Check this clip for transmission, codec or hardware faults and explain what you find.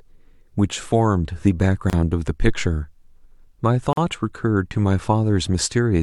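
There are two things going on in this speech: a couple of gaps at joins between separately encoded pieces, and one phantom power thump.

The gaps at the encoded-piece joins come at 1.90 to 1.93 s (about 30 ms) and 3.93 to 3.97 s (about 43 ms), exactly 2.0 s apart. That spacing points to the audio being encoded in 2-second chunks and stitched together without trimming each run's start-up delay and end-of-frame padding. You hear a brief dropout with softened hard edges, then the speech picks up right where it left off.

The phantom power thump lands at 2.48 s and runs to about 2.85 s. Someone switched phantom power or a supply on or off while the input was live, and that voltage step went straight through the coupling capacitors. It comes across as a low, deep bump that dies away quickly, with a decay of around 82 ms.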